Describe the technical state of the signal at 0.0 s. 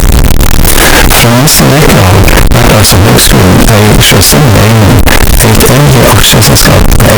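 At 0.0 s, and throughout, the speech is harsh, very loud distortion, likely signed and unsigned mixed up in the 16-bit samples; the waveform jumps sharply at each zero crossing, broadband across the spectrogram.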